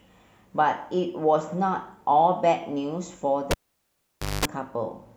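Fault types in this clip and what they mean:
Cable pulled and plugged in: pop at 3.51 s, 0.89 s of near silence, then 0.21 s of 50 Hz mains buzz and a second pop; the buzz distinguishes it from a simple dropout.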